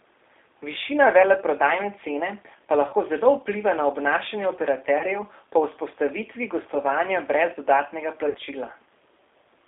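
Throughout, the speech passes through a G.729 codec at 8 kbit/s. It is held to 300 Hz to 3.6 kHz. The sound is plainly rough and synthetic.

VoIP packet loss concealed by the speech codec strikes at 2.88 to 2.95 s, 4.99 to 5.05 s and 8.29 to 8.37 s. About 40, 20 and 60 ms go missing. The decoder extends the last sound into a fading buzz, and the sound stays weak briefly afterwards.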